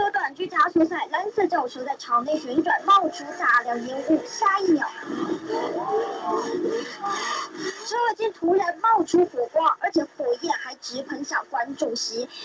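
No faults are audible anywhere in the recording.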